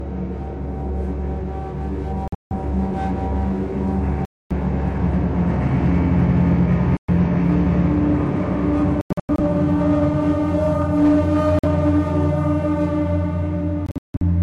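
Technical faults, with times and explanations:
2.28–2.52 s, 4.25–4.52 s, 6.97–7.10 s, 9.01–9.40 s, 11.59–11.65 s, 13.86–14.23 s: Bluetooth dropout. Audio packets likely failed to reach the headphones in time and were discarded, so the output falls silent, then resumes further on as though playback had continued. Each hole removes between about 46 ms and 279 ms of sound. At 2.28, 9.01 and 13.86 s the loss is scattered as several short gaps, the longest about 163 ms at 2.28 and 13.86 s and about 93 ms at 9.01 s.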